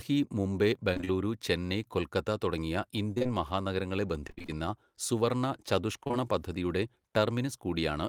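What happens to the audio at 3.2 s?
Right after "ചെന്നൈ കൊൽക്കത്ത തുടങ്ങിയ" there's a cluster of short concealed packet loss, three overlapping drops starting at 3.15, 3.18 and 3.23 s and running to about 3.28 s. Each time roughly 20 ms of speech didn't arrive in time, and the receiver papered over it by extending the preceding sound, pitch-tracked if voiced and shaped noise if not, before crossfading back. You hear a brief smeary wobble there, and the timing stretches by a few milliseconds.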